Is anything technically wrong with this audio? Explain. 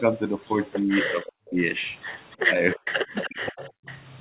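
Yes, two faults recur in this speech clip.

Echo leak, at 0.76–1.32 s, 2.31–2.36 s and 2.74–3.95 s: a copy of the speech about 0.31 s late, around 10 dB down (fainter at 2.31 s), likely from incomplete loudspeaker echo cancellation.

Speech suppressed in double talk, at 0.82–1.58 s, 2.45–2.84 s and 3.28–3.73 s: the voice drops by as much as 40 dB or cuts out, likely because the echo canceller attenuated its own talker along with the loudspeaker echo while they overlapped.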